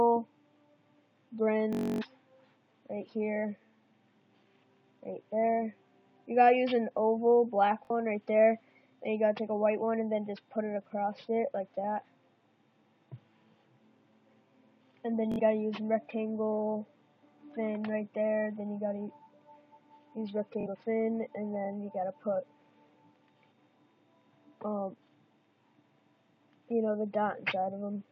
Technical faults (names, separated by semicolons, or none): Bluetooth stutter